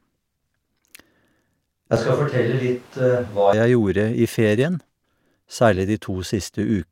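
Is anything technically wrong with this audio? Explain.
Yes. From 1.96 to 3.53 s the speech turns abruptly roomy and hollow with thinner bass and higher room noise at near-unchanged level, likely a switch to a distant microphone. The sudden edges and added noise distinguish it from reverb or EQ.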